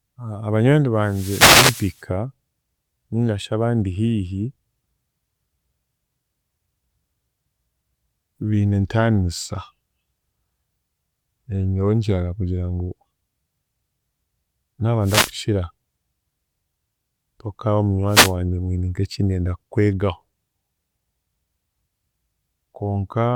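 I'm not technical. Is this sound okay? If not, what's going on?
No. Wireless microphone noise hits occur at 1.02–2.02, 15.02–15.34 and 18.07–18.34 s: the radio link fades briefly, so short bursts of static are heard.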